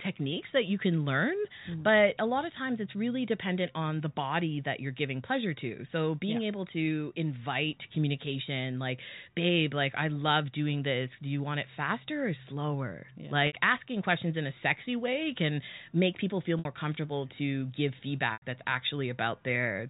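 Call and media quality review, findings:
Packet loss with pitch repetition at 13.47 s (60 ms), 16.59 s (60 ms) and 18.33 s (90 ms): brief held, buzzy tone as the receiver loops the last pitch period and fades it. Gap lengths fit two to three lost packets. Telephone band from G.711 audible throughout.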